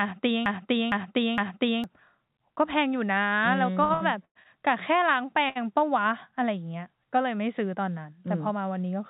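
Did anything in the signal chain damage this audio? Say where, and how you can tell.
Yes. A broken-record loop runs from the very start to 1.84 s. One 0.46 s fragment repeats back to back, three times, and is already under way at 0.00 s. Playback or the stream likely stalled and kept resending its last buffer. The audio meant for that time is lost.

Repeated stalls (stutter) appear from 3.84 to 4.48 s. There are four gaps, totalling 246 ms. The longest is 105 ms, and filler covers about 39% of that stretch. This is a network and jitter-buffer fault. Packets arrived late, so the receiver stretched sound repeatedly. Nothing is missing, but the audio drags.

A short stall from a late packet sits at 5.49 to 5.58 s. The network delay jumped by 68 ms, and the jitter buffer ran dry. The receiver held the last sound for 68 ms, then resumed at the same point. You hear a brief hold, not a gap.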